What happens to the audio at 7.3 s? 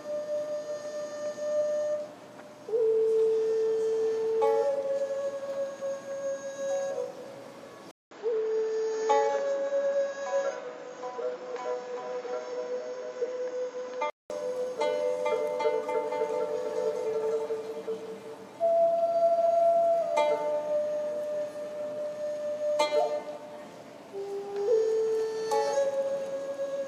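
Nothing goes wrong at 7.3 s. The audio plays through that moment without any audible fault.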